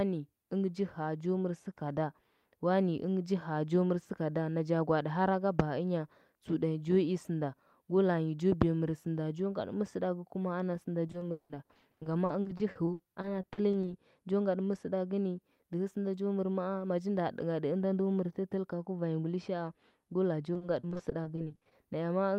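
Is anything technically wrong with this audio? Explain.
Yes. The speech has repeated packet loss, heard as a robotic sound, in two stretches. From 11.07 to 13.89 s, just after "ana sɚnda", audio keeps dropping out, with gaps up to 180 ms. Each hole is bridged by extending the last sound, so about 30% of the span is synthetic fill. From 20.53 to 21.73 s, after "go laa jo", shorter gaps of up to 40 ms recur, concealing about 27%. The result is choppy speech with pieces missing.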